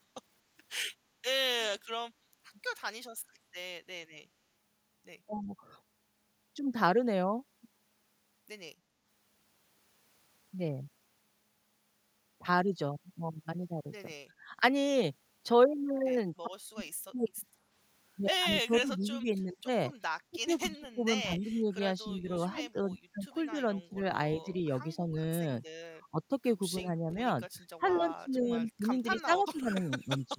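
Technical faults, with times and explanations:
14.4–14.55 s, 16.34–17.16 s, 18.66–19.68 s, 20.3–25.15 s, 26.11–27.11 s and 27.79–30.39 s, speech suppressed in double talk: with both ends talking at once, the echo canceller likely could not separate the near talker from loudspeaker echo and pulled everything down. The speech dips by roughly 10 to 20 dB.
27.86–28.04 s and 29.2–29.38 s, echo leak: one side's loudspeaker echo was likely not fully cancelled, so a copy of the speech returns about 240 ms late, as brief scraps around 20 dB and then 30 dB below the talker.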